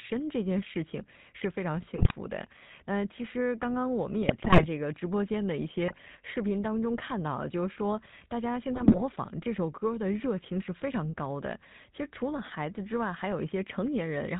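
GSM full-rate codec coding runs throughout: the speech is rebuilt from a vocal-tract model driven by sparse pulses, with nothing above 4 kHz, leaving a plainly buzzy, gravelly roughness. GSM bit errors strike at 1.96 to 2.15 s, 4.23 to 4.67 s, 5.88 to 5.99 s and 8.74 to 9.03 s. Corrupted filter, pitch and gain values distort whole frames, so the speech breaks into squawks, pops and gargling.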